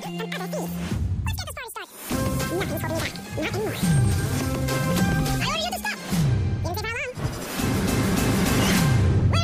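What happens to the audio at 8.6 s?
At 8.6 s the audio is still under the fault that runs through the entire clip: audio read two samples at a time, giving double speed. The data is being unpacked as if each frame held two samples, as happens with a channel-count or sample-width mismatch, so playback runs at 2x and sits a full octave (12 semitones) high.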